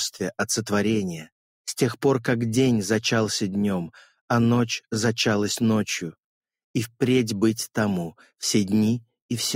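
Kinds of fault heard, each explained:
No faults detected: nothing to flag anywhere in the clip.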